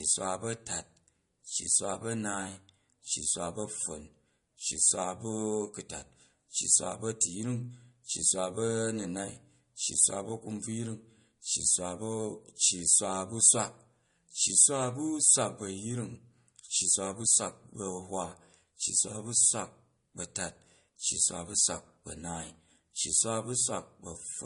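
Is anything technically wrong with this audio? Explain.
Yes. Throughout, the speech stops at 10.6 kHz and sounds watery. This is likely MP3 compression near 40 kbps, which cuts treble and drops weak detail when bits run short.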